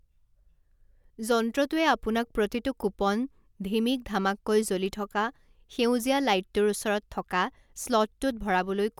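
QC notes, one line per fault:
No faults were found in this speech clip. Nothing in it called for a QC note.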